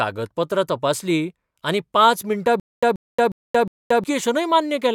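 From 2.60 s to 4.04 s the speech hits a stutter with silent gaps. The same 133 ms scrap of audio plays, drops into dead digital silence for about 227 ms, then comes back, so you get a steady ticking repeat every 360 ms or so, four times over. That's most likely the player or stream stalling and replaying its last fragment on each retry, and whatever should have filled that stretch is simply gone.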